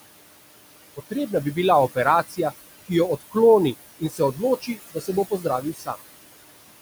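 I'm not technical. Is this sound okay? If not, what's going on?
No. Throughout the clip there are noise suppressor artifacts. A filter keeps turning down the room's background hiss, which itself is normal. The hiss sinks in the gaps and comes back under the talking.

There is also speech cut by the noise suppressor. The filter mistakes bits of speech for noise and turns them down too. Sounds go faint or swallowed at 2.28 to 2.52 s, 3.99 to 4.41 s, 4.61 to 4.78 s, 4.94 to 5.09 s just before "se bo", and 5.61 to 5.97 s just after it.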